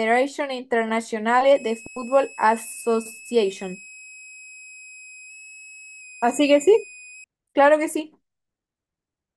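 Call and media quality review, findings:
Switching supply whistle, 1.55–7.24 s: high tone drifting 2.49–2.59 kHz, well below the speech. Pitch wanders with load, unlike a fixed-frequency electrical hum.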